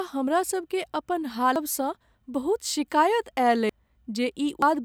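At 1.56 s, just after "हमरा सभकेँ अपन", compressed frames are skipped and the speech jumps ahead by roughly 0.7 s, then by roughly 0.4 s at 3.69 s and 0.3 s at 4.62 s. These jumps fit whole 92.9 ms frames.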